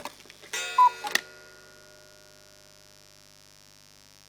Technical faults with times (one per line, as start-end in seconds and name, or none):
0.00-4.28 mains buzz